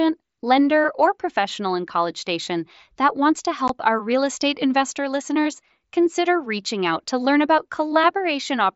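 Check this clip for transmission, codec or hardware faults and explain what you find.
One fault is present: an unconcealed Bluetooth headset packet loss at 3.68 s, between "that wants to" and "our real estate investor". The sound drops out for about 15 ms. That fits two lost voice frames on the link between headset and phone. Nothing filled the gap with a guess of the missing sound. Silence or an idle pattern took its place. The result is a brief hole with abrupt edges. The mSBC wideband link, with its light coding grain and 8 kHz ceiling, carries the rest.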